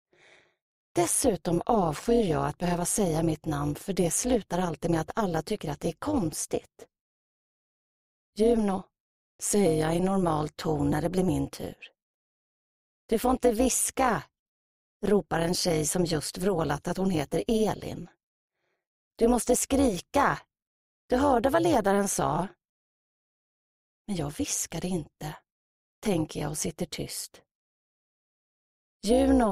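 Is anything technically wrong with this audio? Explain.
Yes. Overlap-add ripple runs through the whole clip. The audio was split into windowed frames and rebuilt with an overlap whose windows do not add up to a steady gain. So the level swells and dips once per frame, at a rate of around 200 Hz. The dips go about 11 dB deep. That is too fast to hear as separate pulses. It comes across as a metallic buzz with extra tones around each note, laid over the sound.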